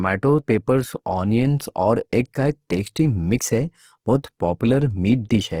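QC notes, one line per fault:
Throughout, Opus compression: the speech has a rough, grainy, noisy texture that's plainly audible the whole way. The band energies hold up, so there's little swirl. The detail inside the bands is smeared into noise, though, which is the signature of Opus in its music mode filling in what it can't afford to code. The bandwidth still reaches about 20.2 kHz, and the damage likely comes from a low bitrate in the region of 16 kbps.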